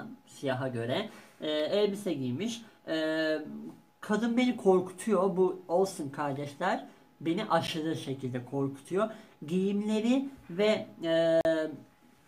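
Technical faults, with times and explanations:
7.67 s and 11.41 to 11.45 s, block of digital silence. The sound cuts out and back with no fade. The 10 ms gap is too short to register as silence and comes across as a tick or dip. The 40 ms gap is a short hole. Either the output buffer was not filled in time, or a calculation produced invalid values.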